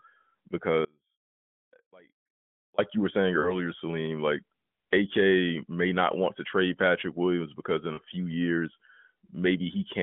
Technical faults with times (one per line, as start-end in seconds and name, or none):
0.85-2.78 audio dropout to a faint residue
3.40-3.65 lost AMR speech frames
7.94-7.99 lost AMR speech frames